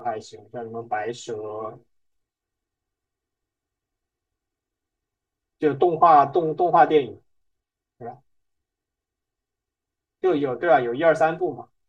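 Speech runs through the whole clip with a hollow, phasey colour from channel delay (comb filtering). One channel lags the other by roughly 3 ms before the mono sum, cutting notches from around 200 Hz upward at even spacing. Unlike a flanger's sweep, these notches stay fixed.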